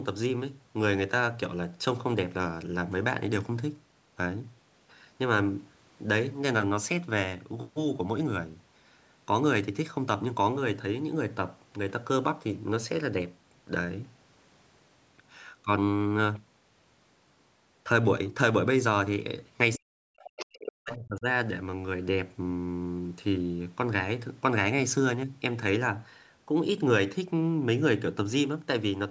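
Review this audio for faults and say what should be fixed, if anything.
Speech suppressed in double talk, 19.77–20.32 s and 20.55–21.26 s: the talker's level dips sharply, by around 40 dB at worst. The likely cause is the echo canceller confusing near-end speech with loudspeaker echo and attenuating both. Retuning the canceller's double-talk detection, or having the talker use a headset, would prevent it.

Other side's voice leaking through, 20.26–20.72 s and briefly at 20.90 s: a second, fainter voice is audible, roughly 10 dB below the talker in the first stretch and about 15 dB below in the short scrap. This is likely residual loudspeaker echo that the canceller failed to remove from the microphone signal. Better echo-path convergence, or lowering the loudspeaker volume, would stop this leakage.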